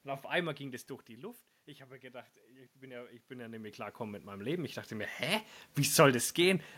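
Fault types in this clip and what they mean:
Automatic gain rising: the input level fell by about 14 dB, and from 2.0 s to 5.51 s the gain control slowly lifted its gain by about 6 dB to compensate. The speech and the room noise behind it rise together over those three and a half seconds. That shared swell is what separates it from the talker moving, as happens around 0.5 s and 3 s, where only the voice level shifts and the room noise holds steady.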